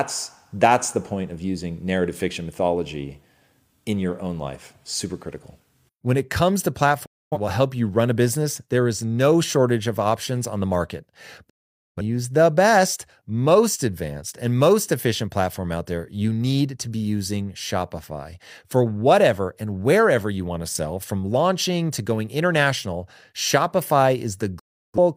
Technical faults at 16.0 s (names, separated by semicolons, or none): none